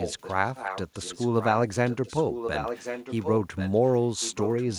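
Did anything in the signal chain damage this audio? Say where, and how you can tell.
Yes: an echo leak in call processing, a delayed copy about 1.09 s behind, at 0.00–0.34, 0.55–1.52, 1.85–3.92 and 4.20–4.78 s. Likely a far-end echo canceller missing loudspeaker pickup.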